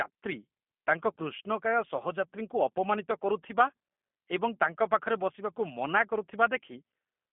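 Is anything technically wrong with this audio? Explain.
Yes. The whole clip has been through a G.729 codec at 8 kbit/s. It models the vocal tract and pitch and keeps only a few pulses per frame, so the speech sounds rough and slightly synthetic, with a narrow phone-line band and nothing above 3.5 kHz.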